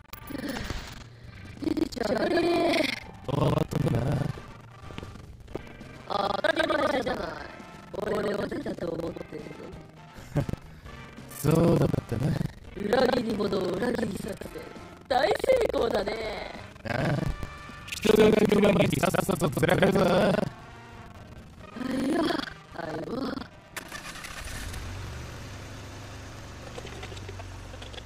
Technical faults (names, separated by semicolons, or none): buffer tearing